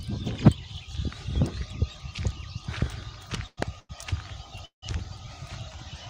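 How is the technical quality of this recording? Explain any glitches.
The recording has three timing glitches clustered between 3.5 and 4.8 s, each adding a pause without losing any audio.

Call audio freeze, at 3.47–3.59 s and 4.65–4.84 s: the sound stops and is replaced by a fading continuation that drops to silence. The first adds about 100 ms with roughly 30 ms of silence. The second adds 170 ms, with about 120 ms of it silent. The likely cause is packets held up in transit, emptying the jitter buffer. Playback then resumes exactly where it left off.

Short stall from a late packet, at 3.79–3.91 s: one packet missed its slot, so the receiver stretched the last sound for about 98 ms, giving a held moment with a slight buzz or dip before continuing from the same point with nothing skipped.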